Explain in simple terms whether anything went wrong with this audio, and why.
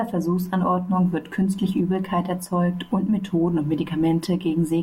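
Nothing went wrong with this speech recording, because no technical fault can be heard anywhere in it. There is no glitch or problem to explain.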